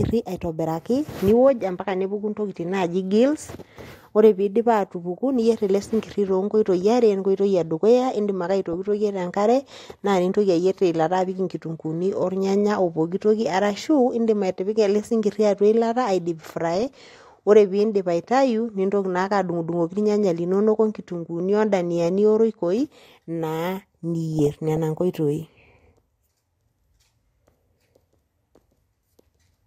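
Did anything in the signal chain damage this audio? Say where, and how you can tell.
Yes. The damage is in the digital radio transmission path: DAB burbling in three bursts, at 8.73 to 8.88 s, 16.68 to 17.17 s and 24.39 to 24.79 s. Over the speech there are short blips of noise in individual frequency bands, and bands jumping in level for up to a frame. That points to weak reception, where a small fraction of a percent of bits survived error correction and corrupted the MP2 samples and scale factors.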